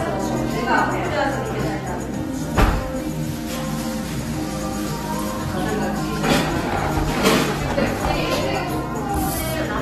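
From start to finish the audio has a hard ceiling: nothing reaches above 12.4 kHz, so the top end sounds dull and closed-in. Plainly audible coding damage sits over the whole clip, with a smeared, watery texture in place of clean detail. This is likely AAC compression, consistent with AAC-LC at around 32 kbps, where too few bits force the encoder to drop the upper band and coarsely quantise what remains.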